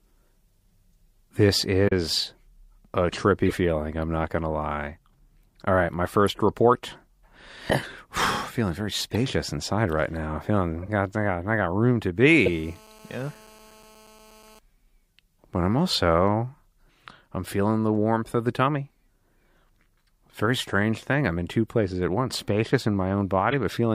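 Speech, hit by two faults. Corrupt frame decoded: damaged compressed frames were played anyway, throwing brief chirps and noise blips at 1.88, 3.46, 6.27 (after "right my"), 9.10, 10.82, 12.46 and 23.51 s. GSM phone buzz: a nearby 2G phone on a call bursting at 217 Hz was rectified by the audio circuit, giving a steady, raspy buzz about 27 dB below the speech from 12.28 to 14.59 s, starting after "I got room to".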